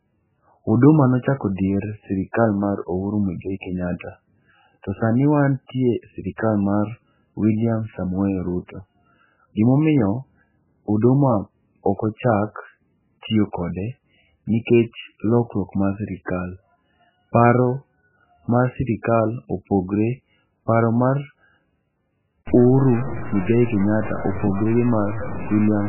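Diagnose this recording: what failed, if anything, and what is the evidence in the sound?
The speech sounds like it went through a very low-rate codec, most likely MP3. The damage is heavy throughout and there's nothing above 3 kHz, which fits a bitrate around 8 kbps. Weak frequency lines get dropped frame by frame, hence the watery smear.

Same codec stage, pre-echo: a short hiss creeps in just before sharp attacks at 3.99 s, 6.36 to 6.38 s, 16.25 s and 19.02 to 19.05 s, spreading 16 to 24 ms. Block-wide quantisation noise is leaking ahead of each onset.

From 22.47 s to the end, there's gritty distortion that tracks the signal, with the error only around 10 dB below it. That points to a sample-format conversion down to about 5 bits, likely truncated without dither.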